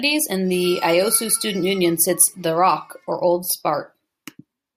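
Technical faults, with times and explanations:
No technical faults are audible in this speech.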